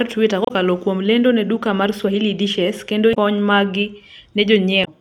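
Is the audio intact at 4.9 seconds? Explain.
No, not cleanly. The moment falls at the tail of a burst of damaged data in the compressed stream, running from 4.81 to 4.88 s. Corrupted bytes there throw the decoder out of sync, so it garbles or skips those frames and hunts for the next valid header. The result is a short chirp or blip of about 60 ms, likely with a jump forward in the speech. A spectrogram would show a brief smeared or blocky patch of broadband energy that breaks the surrounding harmonic pattern. The waveform would show an abrupt discontinuity at the edges of that patch.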